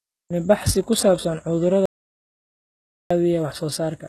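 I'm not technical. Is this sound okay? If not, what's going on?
No. The speech sounds like heavy HE-AAC compression, likely the cause. The treble is rebuilt rather than real, so s sounds turn gritty and metallic. Nothing is left above 12.4 kHz.

There is also an audio dropout to silence. Right after "ku saabsan", from 1.86 to 3.1 s, the sound vanishes completely for 1.25 s. A lost input is the likely cause.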